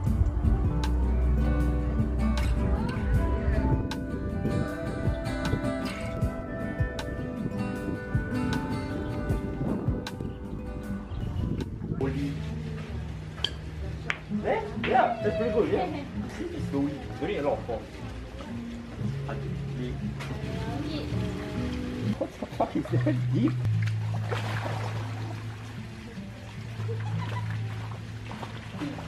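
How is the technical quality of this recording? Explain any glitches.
Nothing stood out on listening; the recording holds steady throughout with no glitches to explain.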